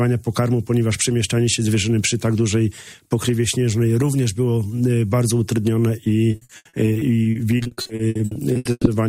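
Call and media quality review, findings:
Repeated packet loss (robotic sound), 6.31 to 8.89 s: choppy, robotic audio with pieces missing. There are 25 gaps, the longest 120 ms, and about 39% of the stretch is concealed. Probable component: jitter buffer and packet loss concealment. Lost or late packets are patched by extending the last sound, and another hole follows soon after. Spectrogram shows smeared, repeated frame-like blocks and abrupt edges. The waveform shows recurring looped segments and dropouts.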